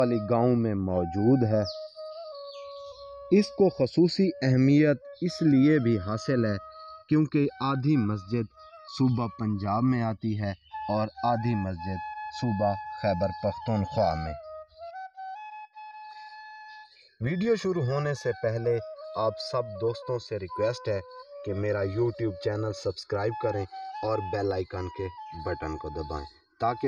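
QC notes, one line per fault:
Throughout: channels drifting apart. The two channels run on clocks that disagree by roughly 100 parts per million, so the inter-channel delay creeps steadily to about 3 ms by the end. In mono, the resulting comb notches glide through the spectrum, heard as slow flanging.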